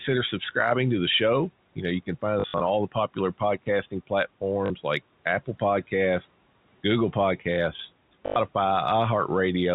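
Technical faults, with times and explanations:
Throughout, block size mismatch (padded): a steady buzz at 43.1 Hz runs under the speech. Each 1024-sample block arrives with a zero-filled gap, and playback runs very slightly slow at 0.999 times.
2.4 to 2.6 s, 4.66 to 4.7 s and 8.26 to 8.36 s, packet loss with last packet repeated: robotic stutters lasting 120 ms (scattered over 200 ms, longest run 60 ms), 40 ms and 100 ms. Missing packets were replaced by replaying the previous one, misaligned with the pitch.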